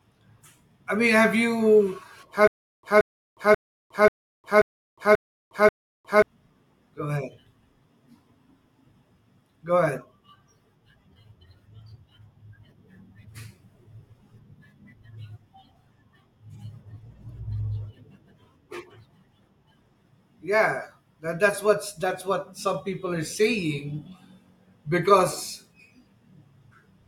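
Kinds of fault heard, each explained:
Stutter with silent gaps: from 2.47 to 6.22 s the speech locks onto one 177 ms fragment, replaying it seven times with 359 ms of digital silence between, a 536 ms cycle; likely a stalled stream retrying, and the underlying audio is lost.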